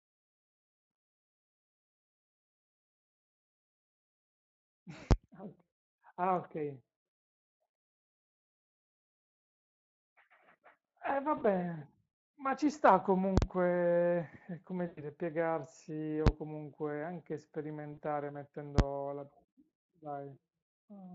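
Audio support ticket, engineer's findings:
Loud bangs at 5.11, 16.27 and 18.79 s; at 13.38–13.42 s a pop, silence, then a pop. Invalid numbers at full scale: infinite or invalid values pinned the output to one extreme value for one processing block, fitting 512-sample and 2048-sample blocks.

Stretched, fading buzz or coloured noise at 11.37–11.45, 14.87–15.00, 17.93–18.00 and 19.69–19.71 s. VoIP packet loss concealed by the speech codec: the speech decoder extrapolated its last pitch and filter across roughly 40, 100, 40 and 20 ms gaps.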